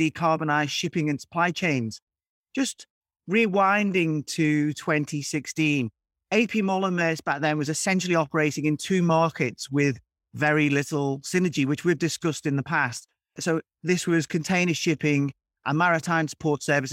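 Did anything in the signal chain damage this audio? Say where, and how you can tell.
No, nothing in this speech recording stood out on listening as damage from any stage of the signal chain.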